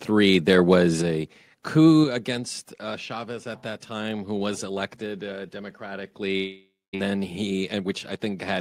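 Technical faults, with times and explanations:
0.49–0.74 s, microphone overload: the loudest syllables turn harsh and crackly, likely because peaks ran about 2 dB past the converter's limit and were flattened.
1.02 s and 2.04 s, microphone volume stepped down: voice and background drop abruptly by about 4 dB, then about 5 dB before "against uh", likely the software cutting input gain.
6.37–6.95 s, long network dropout: the sound stretches into a fading buzz, then silence, and resumes with about 0.56 s missing, likely audio that never arrived.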